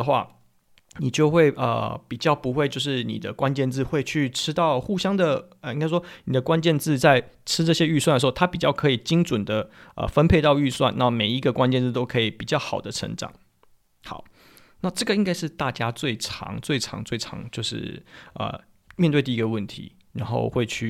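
Speech recording with no audible technical faults anywhere in the clip.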